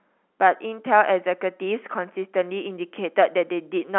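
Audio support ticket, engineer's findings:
No faults found on the speech path; the band-limited telephone sound, nothing above 3.9 kHz, is the G.711 telephone coding on the line, consistent with 64 kbps mu-law.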